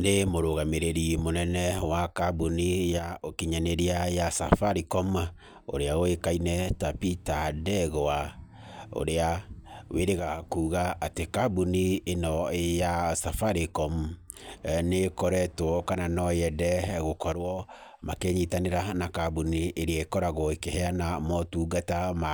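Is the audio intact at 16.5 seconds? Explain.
Yes, the speech at 16.5 seconds plays through intact, with no audible fault at that moment.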